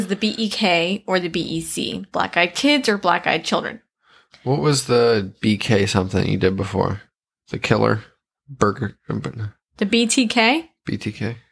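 No dropouts, glitches, distortion or other technical faults turn up anywhere in the recording.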